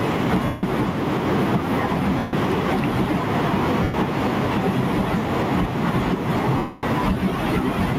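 Across the whole clip the level breathes with gain pumping, with a swing of around 5 dB. The likely cause is input gain set too high for the microphone, with a fast limiter or compressor clamping down on every peak. The result is squashed speech, and the room noise sits about 42 dB below the speech.

Lost LE Audio frames break up the speech four times: 0.45 to 0.63 s, 2.18 to 2.33 s, 3.83 to 3.94 s, and 6.57 to 6.83 s, lasting 180, 150, 110 and 260 ms. In each gap the LC3 decoder keeps replaying the last good spectrum with scrambled phase. Voiced sound turns into a grainy, noisy smear that fades as the gap goes on. The longest gap, at 6.57 s, decays furthest toward silence before the signal returns.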